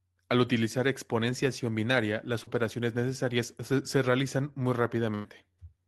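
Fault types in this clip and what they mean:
Short concealed packet loss: About 40 ms of the call audio never reached the decoder in time, and the receiver covered roughly 32 ms of that hole by extending the preceding speech before crossfading back into the real signal. Here it falls at 2.43 to 2.49 s, just after "utilizar exponenciación binaria las" and before "necesarias se realizan muy", and is heard as a brief smear or wobble.
Burst of packet loss: A run of consecutive packets, about 100 ms in total, was lost or arrived too late to be played. The receiver continued the last sound for roughly 97 ms while attenuating it, so it turns into a held buzz if voiced or a fading hiss if not, before playback picks up further along, with that stretch of speech missing. This occurs at 5.15 to 5.26 s, shortly after "necesarias se realizan muy".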